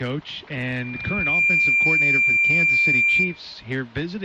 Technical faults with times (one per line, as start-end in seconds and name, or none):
0.61-3.40 loudspeaker feedback squeal